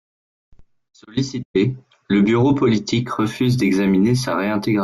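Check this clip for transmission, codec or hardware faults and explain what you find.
Imaging from linear upsampling runs from 3.04 s to the end of the clip. Here the sample rate was raised by straight-line interpolation, a weak filter, consistent with a move from 16 kHz to 48 kHz. The top of the original band is dulled, and a faint mirror image of the speech spectrum sits between 8 kHz and 16 kHz, roughly 30 dB below the signal. It is heard as a light metallic shimmer on sibilants.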